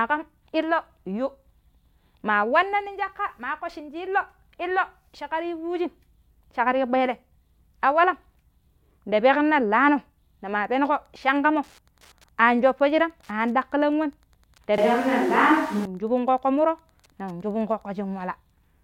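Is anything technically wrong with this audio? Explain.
Yes. Two faults can be heard.

Wi-Fi interference runs from 10.64 s to 17.88 s. A nearby Wi-Fi radio's transmissions are being picked up and rectified by the audio circuit. Its beacon repeats every 102.4 ms. That gives a steady ticking about ten times a second. The ticking is faint, well below the speech, but it is regular. It persists for over seven seconds.

A switch to a distant microphone occurs from 14.78 s to 15.85 s. The speech suddenly turns roomy and hollow. It loses bass. The loudness stays about the same. A bed of room noise appears, well below the speech. The change happens abruptly, and the sound snaps back just as suddenly. This is likely the close microphone's signal dropping out, with a microphone further away filling the gap.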